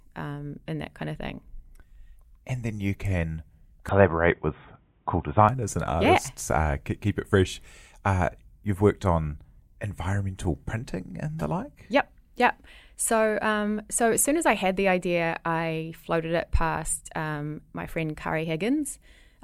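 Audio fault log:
3.89–5.49 s, input switched to a poorer device: right after "then you can" the speech turns dull and boxy, with nothing above 3.8 kHz. The level shifts by roughly 5 dB and a faint new noise floor appears, far below the speech. Full clarity returns at "and artists yeah", with no gap at either change. The likely cause is the recording input moving briefly to a lower-quality microphone or a headset's narrowband call profile, then switching back.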